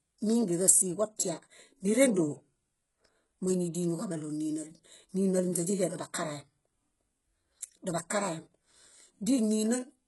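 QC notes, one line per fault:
Throughout, HE-AAC compression: treble stops near 11.5 kHz, and the s sounds come out gritty and metallic, likely heavy band-replicated coding at roughly 12 kbps.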